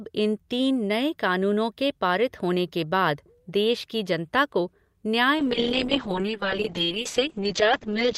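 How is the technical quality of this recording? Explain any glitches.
The recording has one glitch, a call bitrate drop starting at 5.38 s and lasting to the end. The encoder's rate falls from 48 to 6 kbps after the call's bandwidth estimate collapses, so speech is coded far more coarsely and the audio band shrinks from 20 kHz to 8 kHz. The speech turns muffled and rough, worst for about 2.1 s at the lowest rate. Unlike packet loss, nothing drops out or stutters; the sound stays continuous but degraded.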